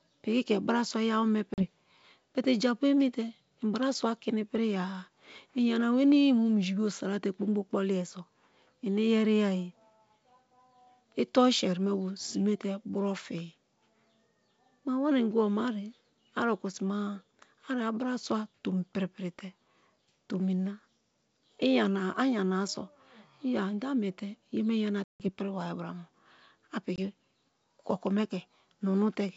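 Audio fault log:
1.54–1.66 s, 25.04–25.29 s, 26.96–26.99 s: packet loss on an ADPCM call. About 40, 160 and 20 ms of G.722 packets went missing, filled with silence, and the decoder's predictor and step size drifted from the sender's, so the speech drops out abruptly and returns slightly distorted.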